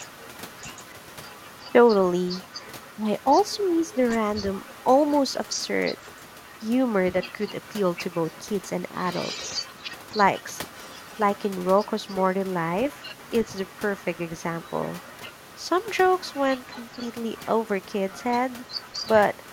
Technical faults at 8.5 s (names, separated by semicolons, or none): other side's voice leaking through